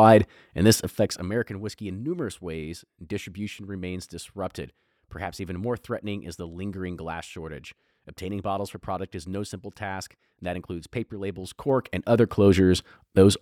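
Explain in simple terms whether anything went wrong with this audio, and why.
Zipper noise appears twice: from 0.93 to 1.53 s, after "and this", the sound drops in fast, audible ticks about twenty times a second, and from 11.17 to 12.52 s, after "and that includes paper", it rises in ticks about ten times a second. A smooth fade would glide silently, but here the level jumps in small steps, and each jump clicks.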